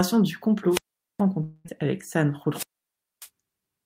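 At 0.70 s the speech breaks up in a wireless microphone squelch dropout: the FM radio link fades, hiss rises, then the receiver's squelch mutes the output for about 0.42 s before the voice returns at 1.22 s. On a waveform this is a flat gap after a brief noisy swell. The spectrogram shows a broadband haze followed by a blank column.

From 1.43 s to 1.67 s the sound smears into a buzzy continuation of itself for about 0.21 s, with no stretch of silence, and then resumes with roughly 0.22 s skipped. This is likely a long network dropout, where packets stopped arriving and the receiver concealed the gap. The spectrogram shows repeated, smeared harmonics and then an abrupt jump.

A second squelch dropout runs from 2.51 s to 3.29 s, with a longer mute of about 0.59 s between the rising static and the recovery.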